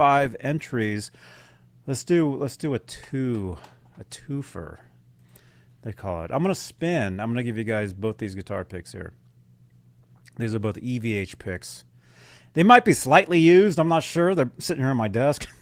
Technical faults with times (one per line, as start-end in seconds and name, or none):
none